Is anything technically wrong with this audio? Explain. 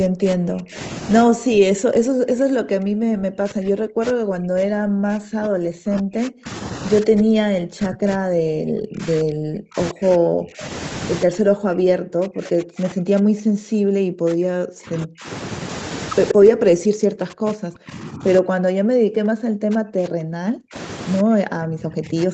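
Yes, two problems. The first is speech suppressed in double talk, across almost the whole clip: 0–0.79 s, 1.24–6.48 s, 7.01–10.64 s, 11.24–15.29 s, 16.33–20.75 s, and 21.22 s to the end. The speech dips hard, roughly 40 dB at worst. That's likely an echo canceller that couldn't separate the talker from loudspeaker echo while both ends spoke, so it ducked everything.

The second is a brief echo leak at 16.28–16.34 s, just before one of those suppressed stretches. You get a scrap of delayed copy about 127 ms behind the speech and only about 5 dB quieter. It's likely residual loudspeaker pickup that the far end's canceller let slip back down the line.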